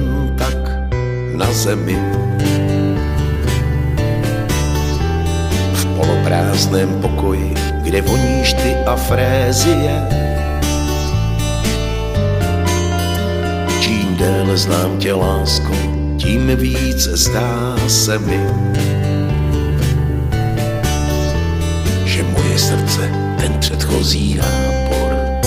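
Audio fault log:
23.68–23.73 s, one channel drops out: for about 50 ms the level takes a sudden dip of about 6 dB and then snaps back. That's likely one stereo side vanishing briefly, so the mono sum keeps only half the shared material, and anything carried by that side alone disappears.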